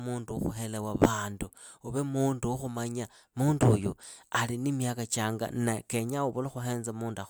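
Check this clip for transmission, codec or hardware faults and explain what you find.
No transmission, codec or hardware faults can be heard anywhere in this speech recording, and the signal stays steady and continuous throughout.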